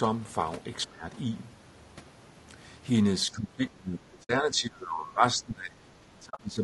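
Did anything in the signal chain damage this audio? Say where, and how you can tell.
Yes, at three stages. At the codec, the whole clip of speech carries plainly audible damage from low-delay AAC compression, likely AAC-ELD at a bitrate around 32 kbps. At that rate its coarse quantisation leaves noise spread into the gaps between the pitch harmonics. The voice sounds rough and grainy throughout, and the top band has a thin, synthetic quality.

In call processing, the speech is suppressed in double talk. The echo canceller could not tell the near talker from loudspeaker echo while both sides spoke, and it likely turned down the wanted speech along with the echo. From 0.87 to 1.04 s the level dips by about 15 dB. From 3.28 s to the end it is held down by as much as about 20 dB over roughly three seconds, and the speech sounds pulled back in patches.

On the network path there is AAC frame loss with muting. 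The decoder replaced the missing frames with silence, and its overlapping windows fade the sound out and back in, so the gaps are soft-edged holes. The first hole runs from 4.23 to 4.30 s and lasts 60 ms, which fits three lost frames of about 20 ms. From 6.29 to 6.44 s, 80 ms of loss is scattered over 140 ms, with the longest run about 40 ms.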